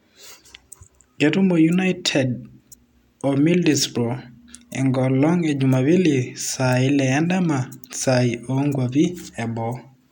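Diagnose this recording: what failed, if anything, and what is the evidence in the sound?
Nothing failed here: the speech shows no defect at any stage from capture through playback. No dropouts, clicks, distortion or level jumps can be heard anywhere in the recording.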